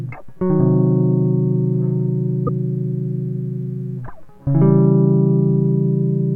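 A broken MP3 bit reservoir shows up at 2.46 to 2.49 s, where the music skips forward with a brief glitch lasting roughly one 24 ms frame. The likely cause is a cut in the MP3 stream. Frames in this format can borrow spare bytes from earlier frames, so when some frames go missing, the next one reaches back for its data, decodes bytes belonging to a different frame, and produces this short corrupted blip.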